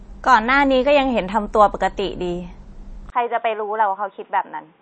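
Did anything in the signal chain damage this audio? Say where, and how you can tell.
Yes. MP3 compression, at the codec stage, runs through the whole speech clip. Nothing survives above 8.3 kHz and the top end sounds watery and swirly, which fits a low bitrate around 32 kbps. Starved of bits, the encoder likely cut the treble and dropped weak spectral lines frame by frame.

An input switch to a poorer device, at the input-device stage, happens at 3.10 s and lasts to the end. A 20 ms gap marks the switch. After it the band stops near 3.8 kHz, the level falls a few decibels, and a faint new noise floor appears, likely from a narrower microphone or headset call profile.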